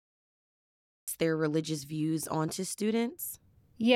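From 0 to about 1.08 s the file holds nothing but digital silence, and then the speech bursts in mid-phrase at "their religious views onto" with no natural attack: a cut-off start. Capture evidently began late, so the opening of the utterance was never recorded. On a waveform this appears as a flat line that jumps straight to speech at 1.08 s. A spectrogram shows a blank region ending in an abrupt vertical edge.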